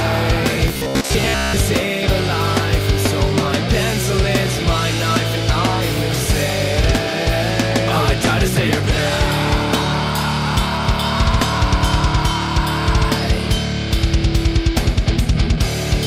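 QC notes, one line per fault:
0.68–1.60 s, robotic sound from repeated short buffers: fresh audio was likely arriving too slowly, so playback kept looping the last fragment of roughly 15 ms instead of the real material, which was skipped for most of this stretch. Those identical repeats impose a fixed periodicity, heard as a rigid metallic buzz near 66.8 Hz, while the overall shape of the sound still loosely comes through.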